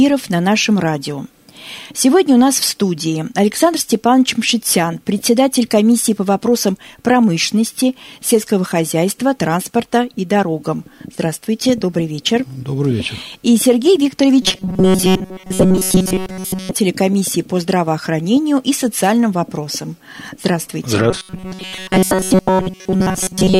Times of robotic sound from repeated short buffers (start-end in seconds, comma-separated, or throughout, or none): 14.42-16.73, 21.10-23.59